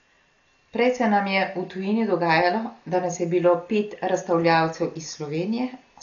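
From start to finish the speech is dull and band-limited, with nothing above 7.1 kHz, and heavy coding damage shows up as a rough, fluttering noise clinging to voiced tones. The likely cause is Dolby Digital compression at a very low rate, consistent with roughly 40 kbps: the encoder has narrowed the band and starved many frequency lines of mantissa bits, so the decoder fills those gaps with dither noise instead of the original detail.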